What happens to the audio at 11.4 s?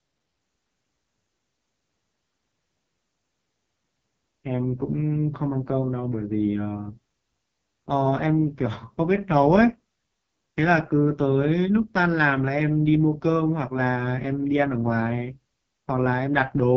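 At 11.4 s, as across the whole clip, the speech passes through the AMR wideband (HD Voice) codec at a very low rate, likely its lowest 6.6 kbit/s mode. The pulse-driven vocal tract model is starved of bits, so the speech sounds rough and raspy, with nothing above 7.6 kHz.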